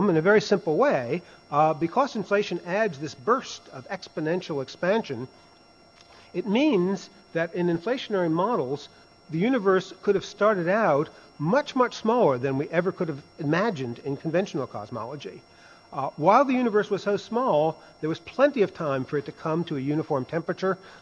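The clip is audio, and nothing is technically wrong with it.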